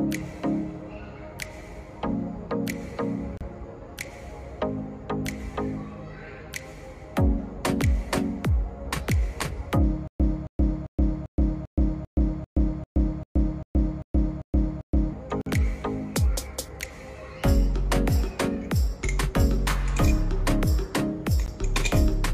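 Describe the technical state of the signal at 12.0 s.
At 12.0 s the signal sits inside a stutter with silent gaps running from 10.08 to 15.13 s. The player or stream has likely stalled, and each retry replays the last buffered fragment before running dry. The result is a roughly 273 ms burst repeating 13 times, with about 122 ms of digital silence between, a steady cycle near 395 ms. Whatever audio belonged to that stretch is missing.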